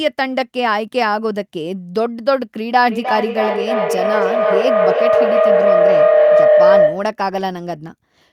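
From 2.88 s to 7.19 s the speech is overtaken by feedback howl. A microphone and loudspeaker in the same room form a loop with more than unity gain, so each pass returns louder and narrows towards the frequency the loop favours, here a tone around 700 Hz. It swells until it peaks at about 7 dB above the speech, pulsing roughly every third of a second at the loop's delay, and stops only when the loop is broken.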